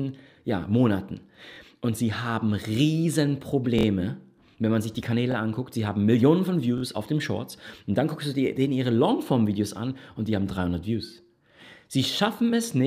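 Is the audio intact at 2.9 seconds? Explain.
Yes, at 2.9 seconds the audio is intact, with no dropout, click, distortion or other fault at that point.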